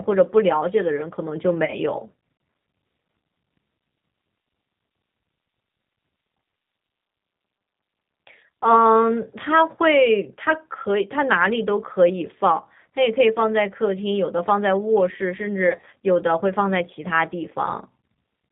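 Throughout, the speech carries plainly audible G.729 codec damage, consistent with an 8 kbit/s stream: pulse-based rebuilding sounds rough and synthetic, and a spectrogram shows nothing above 4 kHz. At 1.65 to 1.77 s and again at 15.67 to 15.89 s, VoIP packet loss is concealed by the speech codec. The decoder extends the last pitch and filter into fading buzzy tones or coloured noise, seen as shrinking waveform envelopes, with weak speech lingering afterward.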